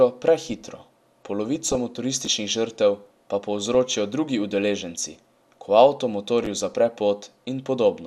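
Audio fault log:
1.48–1.75 s, 3.58–3.75 s and 6.72–6.75 s: DAB burbling. Bit errors get past the error correction into the MP2 audio data. Damaged samples put short blips of noise in single sub-bands, and damaged scale factors make sub-bands jump in level for up to a frame. The first burst is the longest and densest. The second sits between "žrtev pa" and "drugi udeleženci ko avto".
2.25–2.27 s and 6.44–6.46 s: chunks out of order. Each time, a 10.67 ms chunk plays one chunk late, after the audio that should follow it. Nothing is lost, but the swap leaves three hard joins. These are heard as a brief jumbled moment just before "žrtev pa" and just after "drugi udeleženci ko avto".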